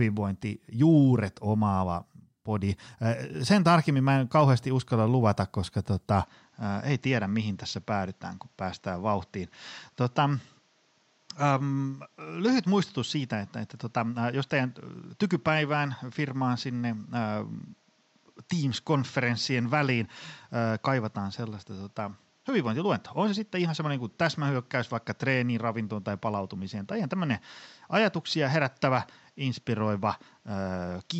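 At 6.24 s the input likely switched to a poorer device. Afterwards the speech is dull, cut above 7.7 kHz, about 5 dB quieter, with faint new background noise.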